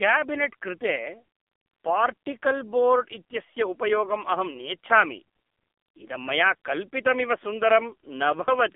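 From start to end, the speech carries AMR narrowband mobile codec damage. Nothing passes above 3.8 kHz, and the band sits roughly between 250 Hz and 3.6 kHz. The voice sounds heavily buzzy and synthetic, which fits a low mode near 5.9 kbps.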